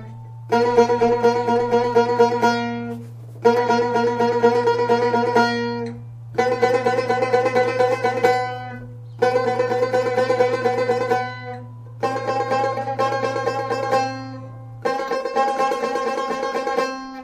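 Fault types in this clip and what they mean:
No fault types can be heard in this clip.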